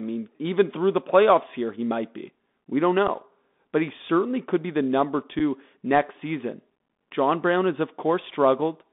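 A speech recording carried over a Bluetooth CVSD headset codec, with two dropouts from unconcealed Bluetooth headset packet loss. The whole clip sits in a narrow band from about 200 Hz to 3.6 kHz, and the one-bit up/down coding, which fits a 64 kbps CVSD link, leaves plainly audible damage: scratchy s sounds, strained loud high passages where the step size can't keep up, and a granular hiss under the speech. A spectrogram shows a hard ceiling below 4 kHz with speckled noise filling the band. At 3.08 s and again at 5.39 s, a single packet was dropped and not concealed, leaving a hole about 7.5 ms long with abrupt edges. Each gap appears in the waveform as a brief flat stretch with sharp edges. On the spectrogram it shows as a thin vertical blank band, and the speech right after it is briefly quieter.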